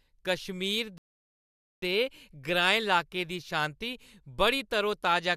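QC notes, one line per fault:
0.98–1.82 s, rebuffering stall: the speech drops into dead silence for about 0.84 s, then picks up at exactly the point it left off. The player's buffer ran dry and it waited for more data, so nothing is missing, but the clip runs 0.84 s longer.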